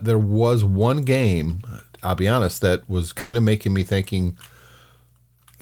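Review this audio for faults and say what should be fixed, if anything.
Burst of packet loss, 3.19 to 3.35 s: 140 ms of speech went missing and was replaced by a fading continuation, not the silence of a dropout. Forward error correction or a deeper jitter buffer would prevent it.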